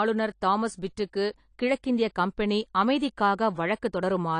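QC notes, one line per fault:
Throughout, AAC compression: the speech sounds dull and smeared, with plainly audible codec damage and nothing above 10.1 kHz. This is likely AAC-LC coding at a low bitrate, fitting about 32 kbps, where the encoder drops the top band and quantises coarsely.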